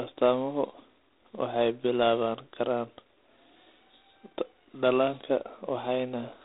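Speech runs through G.726 ADPCM coding for its whole length, with nothing above 3.9 kHz and a harsh, rasping hiss that rises and falls with the speech level, which fits the 24 kbit/s rate. Unlike G.711's steadier grain, this noise comes from coarse prediction-error steps.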